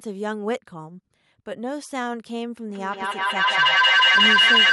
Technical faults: feedback howl

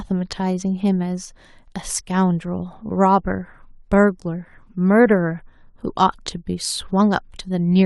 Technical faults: none

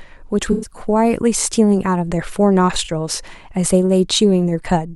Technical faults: AAC frame loss with concealment

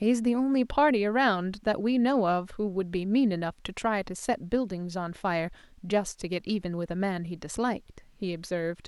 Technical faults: none

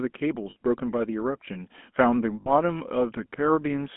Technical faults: GSM full-rate codec; lost GSM frames

